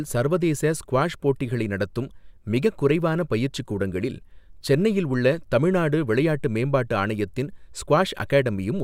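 Nothing in this speech recording stands out as a technical fault, so there's nothing to flag here.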